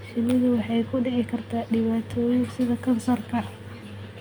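Nothing in the recording stood out as a technical problem on listening.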